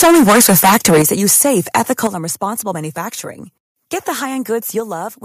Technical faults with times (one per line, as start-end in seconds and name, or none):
0.00-2.07 microphone overload
1.02 microphone volume stepped down
2.07 microphone volume stepped down
4.80 microphone volume stepped down